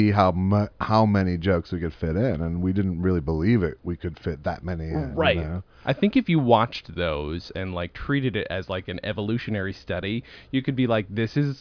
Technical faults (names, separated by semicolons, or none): none